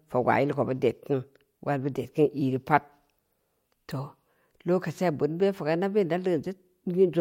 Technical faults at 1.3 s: none

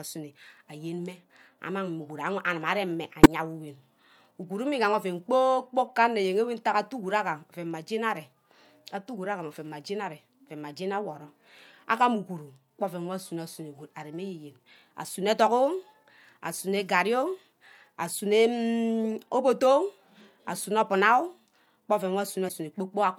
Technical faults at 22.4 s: compressed frames skipped

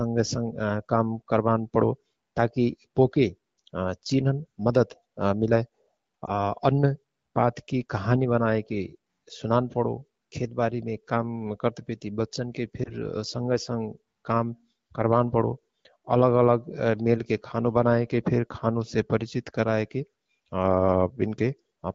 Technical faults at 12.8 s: lost AMR speech frames

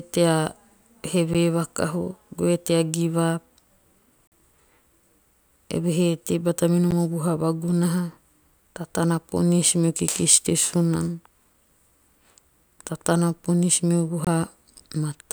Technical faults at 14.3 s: block of digital silence

